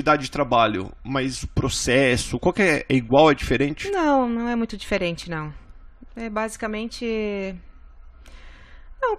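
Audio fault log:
4.98–5.25 s, loud pop: a sudden voltage step, likely from a plug, a switch or a static discharge, entered the signal chain just after "não é muito". The downstream circuitry shaped it, and it is heard as two sharp pops, around 5 dB above the speech, which carries on underneath.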